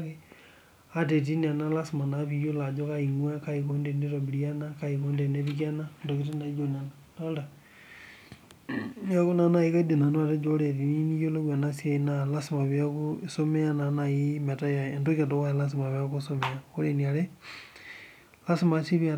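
No technical faults are audible.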